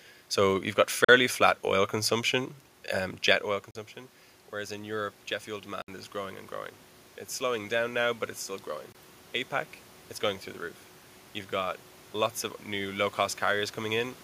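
At 1.04 s, just after "you've got" and before "flat oil consumption um", the most likely cause is a Bluetooth dropout: audio packets missed their delivery window to the headphones and were discarded. The output falls silent for about 40 ms, which fits two lost packets, then resumes as though the audio had kept playing underneath. The same 40 ms hole recurs at 3.71 s, right after "consumption um jet oil".

Around 3.5 s the talker moves and the voice gets quieter at the microphone, with the room noise still audible. From 4.51 to 6.45 s, automatic gain rising follows: the gain control, finding the input about 14 dB quieter, lifts its gain by about 4 dB over roughly two seconds. Voice and background swell together rather than the voice alone.

Inside that swell, at 5.82 s, a longer dropout cuts about 61 ms, consistent with three packets lost in transit. At 8.92 s, after "now but it's still", a likely single-packet gap of about 20 ms leaves a brief hole before the sound picks up mid-stream.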